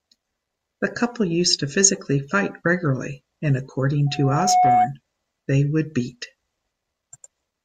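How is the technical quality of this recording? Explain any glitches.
The recording has one clear glitch, a loudspeaker feedback squeal. It runs from 4.06 to 4.94 s, after "physically fight regularly and" and before "they would beat". A 732 Hz tone swells over about half a second until it rings louder than the speech. The microphone is re-amplifying its own loudspeaker, and at that frequency the loop feeds itself.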